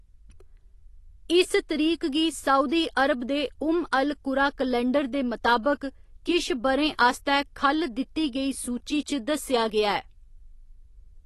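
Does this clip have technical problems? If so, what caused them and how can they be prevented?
Yes. Throughout the speech, nothing is present above 12 kHz, and the remaining band sounds dull and smeared, with a warbling, fizzy edge on sibilants and held sounds. This is likely AAC compression, with AAC-LC quantising each frame's spectrum so coarsely that bands drop out or are replaced by substitute noise, which fits a bitrate around 32 kbps. A plain low-pass filter would remove the top cleanly, without the swirling texture that marks codec damage. To prevent it, encode at a higher bitrate or keep an uncompressed master.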